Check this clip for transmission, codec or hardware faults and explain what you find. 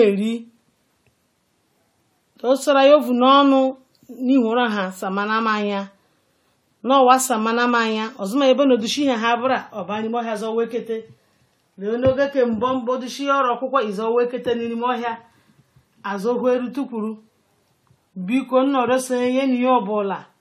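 There is one fault, generation loss, and it runs through the whole speech clip. The sound is swirly, smeared and hollow, with blurred attacks and nothing above 18 kHz. It is likely repeated AAC-LC coding, perhaps four passes, fitting 64 kbit/s. Each pass requantises on a shifted frame grid, so noise and spectral holes build up.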